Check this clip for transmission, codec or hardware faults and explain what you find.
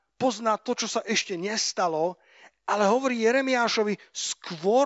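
No faults found in this speech recording.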